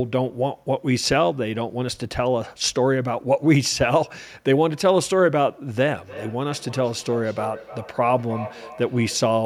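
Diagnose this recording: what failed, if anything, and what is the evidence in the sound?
Feedback echo between two devices, 5.83 to 9.4 s, call processing: speech recurs roughly every third of a second, about 16 dB down, replayed by a nearby device the echo canceller cannot see.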